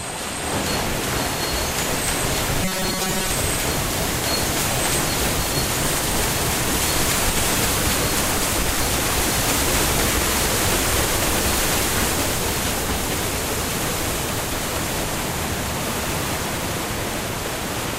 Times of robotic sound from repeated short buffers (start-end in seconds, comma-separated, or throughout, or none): 2.63-3.30